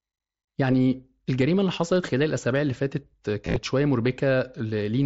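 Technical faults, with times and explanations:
3.45 to 3.56 s, concealed Bluetooth headset packet loss: a brief buzzy patch, then a slight warble as clean sound returns. Headset packets dropped repeatedly, about 68 ms lost across 105 ms in gaps of at most 15 ms, each filled by repeating the best-matching recent waveform.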